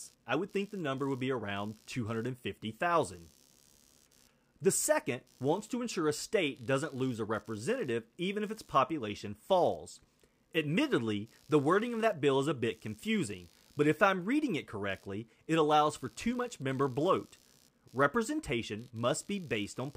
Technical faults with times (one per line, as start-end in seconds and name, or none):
0.00-19.96 computer activity noise